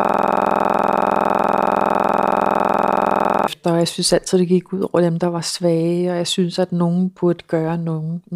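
From the very start until 3.48 s, the speech is replaced by a system hang loop. The machine stalled while the audio hardware kept replaying one 46 ms slice of its ring buffer, which fits a 2048-sample buffer. Dozens of identical repeats at 21.5 Hz produce a rough, rattling buzz that ends abruptly when normal speech resumes with "og jeg synes altid". Unlike a jittery stutter, every repeat is identical and the rate never drifts.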